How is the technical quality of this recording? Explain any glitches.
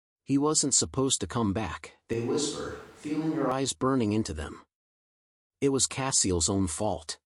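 The recording has one noticeable glitch. From 2.13 to 3.52 s, between "supposed to come back" and "burning into them", the speech turns abruptly roomy, hollow and bass-light, about 5 dB quieter, with noise about 25 dB below it. This is likely a switch to a distant microphone that picks up more room than voice. The waveform steps down, and the spectrogram shows weaker lows and a raised noise floor, with sharp edges.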